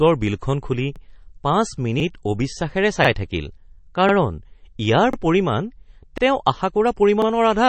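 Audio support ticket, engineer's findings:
Overlapping chunks: short stutter, a 44 ms slice of sound replayed, at 0.96, 2.00, 3.05, 4.09, 5.13, 6.18 and 7.22 s. Spacing steps by about 1.04 s, i.e. 1 s chunks each re-sending the tail of the previous one. Component: chunked processing or streaming buffer, join logic. Differs from dropouts: nothing lost, material duplicated, so a doubled fragment rather than a gap; regular spacing rules out random packet loss.

MP3 compression, likely cause: swirly, watery texture across the whole clip, smeared consonant attacks, metallic chirp on s sounds, band empty above 8.3 kHz. Damage plainly audible; sound fits a low bitrate around 32 kbps. Encoder short of bits, hard treble cutoff, weak spectral lines toggling per frame. Differs from a plain low-pass filter: the fixed cutoff comes with time-varying warble, not just dullness.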